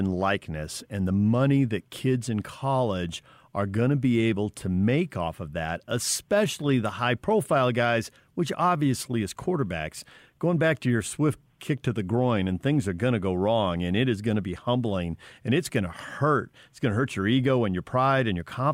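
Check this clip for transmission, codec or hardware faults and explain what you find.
No faults detected here.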